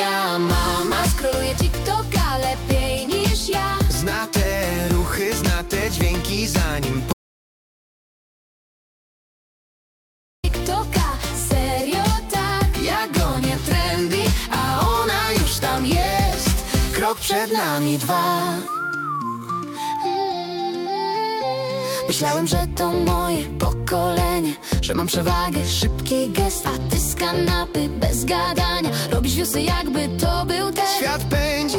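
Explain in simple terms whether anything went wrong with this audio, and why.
An audio dropout to silence runs from 7.13 to 10.44 seconds. The sound cuts off mid-flow into about 3.3 seconds of total silence, with no background hiss at all. The likely cause is a lost input, such as a disconnected device, while recording continued, so that stretch is simply gone.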